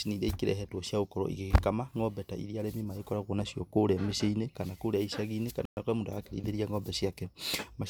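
A speech recording with a likely Bluetooth stall, where interference held up the wireless packets long enough for the headphone buffer to empty. Playback drops to complete silence from 5.65 to 5.77 s, a gap of 117 ms, before the speech resumes.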